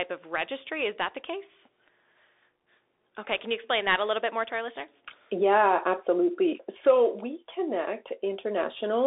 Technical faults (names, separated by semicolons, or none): Bluetooth CVSD headset codec